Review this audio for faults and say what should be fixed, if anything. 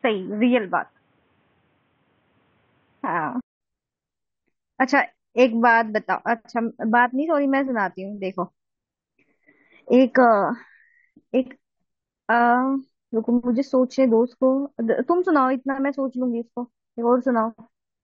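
From 0.0 to 3.61 s the speech sounds dull and boxy, with nothing above 3.8 kHz and a faint added hiss well below it. A 200 ms silence follows, then full bandwidth returns at the same level. The likely cause is an input switched to a poorer device. Lock the recording to one microphone and turn off automatic input switching before recording.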